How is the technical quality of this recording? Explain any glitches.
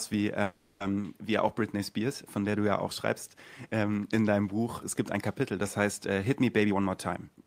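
Two network-related glitches are audible in this speech recording. From 0.43 to 0.82 s there is a call audio freeze. Packets were likely delayed and the jitter buffer ran dry, so the receiver filled 370 ms with a fading continuation of the last sound. Nothing is lost; the speech simply resumes late. From 6.59 to 7.45 s a jitter buffer speed-up trims about a fifth of a second of pitch periods to cut excess delay, so the speech runs at 120% speed without changing pitch and sounds hurried.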